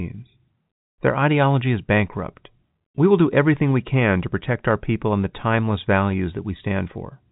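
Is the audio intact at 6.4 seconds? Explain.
Yes, the audio is intact at 6.4 seconds, with no dropout, click or distortion at that point, only the expected narrowband telephone sound of G.711 coding, which passes nothing above about 3.8 kHz.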